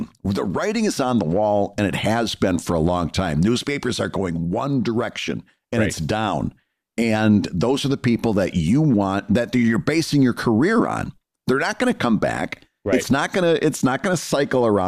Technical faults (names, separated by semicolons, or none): none